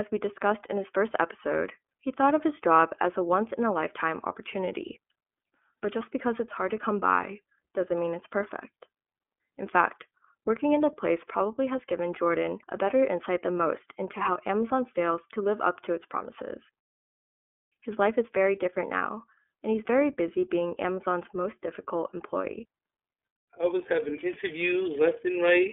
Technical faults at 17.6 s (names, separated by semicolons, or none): iLBC codec